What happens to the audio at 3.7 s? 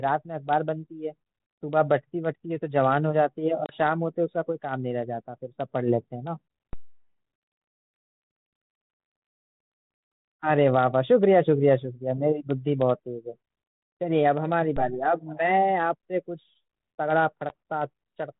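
A hard-edged gap of silence cuts through the speech from 3.66 to 3.77 s, and the sound comes back with brief, slight distortion before settling. This is packet loss on an ADPCM call: about 30 ms of audio, a few packets, went missing on the 32 kbit/s G.726 link and was filled with silence. The decoder's adaptive predictor and step size then drifted out of step with the sender's and needed some tens of milliseconds to realign.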